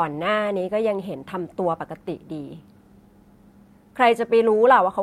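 No faults found in this speech recording.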